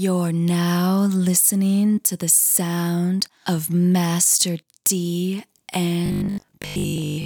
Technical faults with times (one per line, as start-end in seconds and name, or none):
6.06-7.26 robotic sound from repeated short buffers